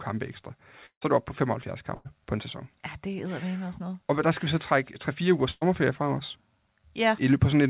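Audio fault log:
0.86–1.03 s, long network dropout: the audio stops arriving and the receiver extends the last sound as a buzz or hiss that fades away, leaving about 90 ms of silence before the audio returns. When it returns, about 160 ms of material is gone, so the sound jumps ahead rather than picking up where it stopped. The cause is likely a network interruption long enough that the concealment ran out and fell silent.
1.95–2.07 s and 5.51–5.63 s, burst of packet loss: in each case about 100 ms of audio never reached the player in time. The receiver fills the hole by repeating the preceding sound and lowering it across the gap, covering about 94 ms the first time and about 106 ms the second, the latter with no silent stretch at all. The audio then resumes ahead of where it broke off, with the lost 100 ms simply absent.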